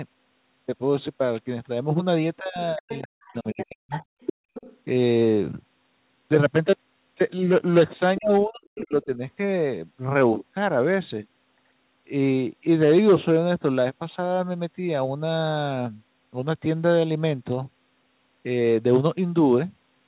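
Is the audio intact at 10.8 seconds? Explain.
Yes, the speech at 10.8 seconds is intact, with no fault at that moment.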